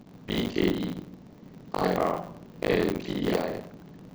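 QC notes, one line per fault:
throughout buffer tearing. A rough robotic buzz at 50 Hz rides on the speech and stops in pauses. The program writing the buffer and the hardware reading it have slipped. About half of each buffer replays audio around 70 ms old. Hard joins on both sides cause the buzz.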